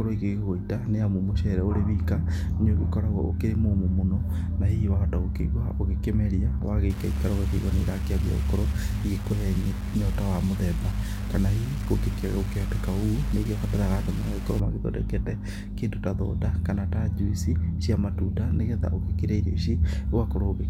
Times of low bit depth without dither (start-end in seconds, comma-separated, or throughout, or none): 6.90-14.60